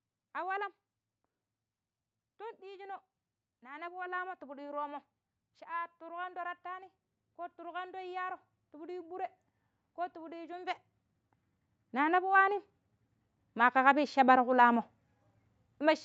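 From 2.24 to 9.32 s, automatic gain rising lifts speech and background together by about 12 dB, seen as a slowly widening waveform envelope and brightening spectrogram.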